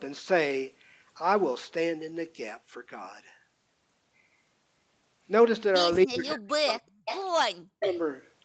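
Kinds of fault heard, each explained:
Speech suppressed in double talk: The speech sinks abruptly by as much as about 40 dB, from 6.05 to 7.07 s and again from 7.56 to 8.02 s, roughly a second and then half a second. The likely cause is an echo canceller meeting talk from both ends at once and damping everything it could not sort out. Unlike a network dropout, the level is pushed down rather than replaced by silence or glitches, and it tracks the overlapping talk.
Echo leak: A delayed copy of the speech returns about 346 ms after the original, in short scraps at 6.68 to 6.73 s and 7.05 to 7.19 s, each about 10 dB under the speech, and at 7.80 to 8.00 s, only about 5 dB under. The likely cause is a loudspeaker on one side whose echo canceller let part of its microphone pickup return. Room reverberation blurs a sound continuously, whereas this comes back as a distinct, fixed-delay repeat.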